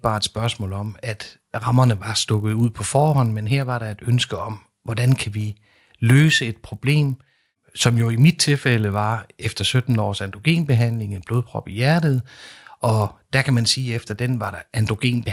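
Throughout the speech, a resampler restarted on every block leaves a small error at each 20 ms block edge, where conversion, likely from 24 kHz to 48 kHz, lacked neighbouring samples. It sounds like a 50 Hz buzz riding on the voice, seen as evenly spaced vertical lines.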